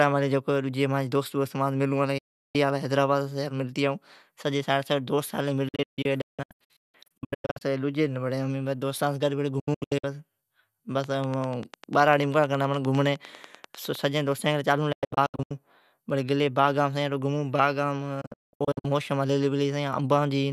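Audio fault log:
2.18–2.55 s, 5.68–7.62 s, 9.59–10.04 s, 14.92–15.51 s, 18.21–18.85 s digital broadcast dropout: The speech fades to silence within 8 ms and returns. The first is one 360 ms hole. The rest break into several short holes, up to 192 ms. Corrupted frames were muted, and their size fits 24 ms frames.
11.04–13.96 s train of clicks: About thirty clicks of much the same shape tick at a steady 10 per second. They peak about 5 dB above the speech and are heard in pauses too. Likely interference from nearby equipment injecting regular pulses.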